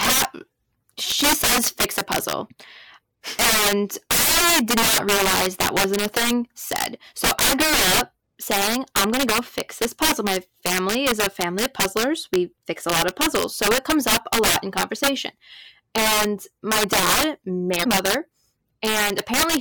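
Violent, sharp cracks burst out of the louder syllables all through this speech recording, far harsher than ordinary clipping. That is integer overflow: the level was pushed about 19 dB past the limit, and roughly 7 percent of samples wrapped to the opposite sign instead of being held at full scale. A short glitch cuts in at 8.57 s, between "I grew up" and "I'm going to go", and a longer blip follows at 17.80 to 17.86 s, just after "my dad". These are damaged data in the compressed stream: the decoder misread corrupted frames, lost sync and skipped ahead to the next valid header.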